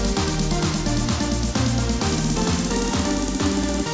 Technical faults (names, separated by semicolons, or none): none